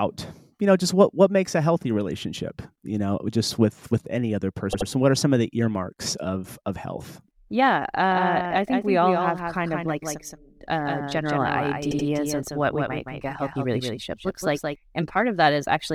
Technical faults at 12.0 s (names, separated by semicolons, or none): doubled audio track; repeated frames